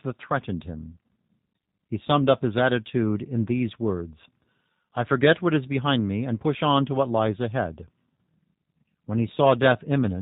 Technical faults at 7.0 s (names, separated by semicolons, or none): G.729 codec